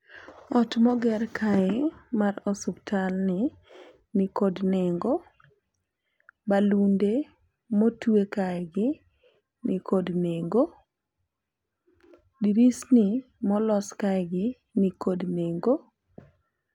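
Nothing in this recording gives away a technical problem, and it just runs along as it should.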